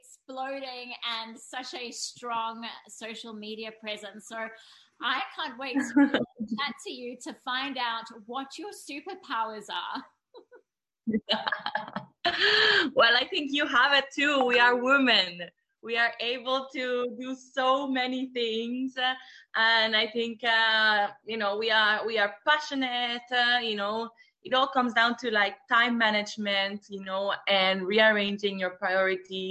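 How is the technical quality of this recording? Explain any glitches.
No glitches turn up anywhere in this recording, so there's nothing here that needs explaining.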